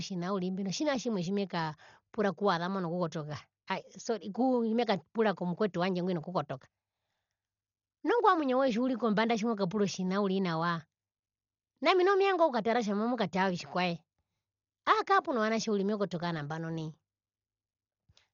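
Dolby Digital compression damage runs throughout the speech, with its cause most likely a starved AC-3 encode, which fits a bitrate near 40 kbps. Nothing survives above 6.9 kHz, so it sounds dull, and bands refilled with dither noise leave a rough flutter around tones.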